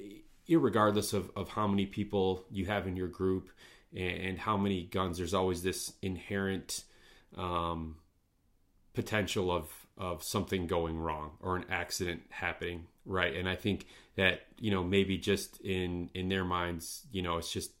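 No technical faults are audible at any point in the speech recording.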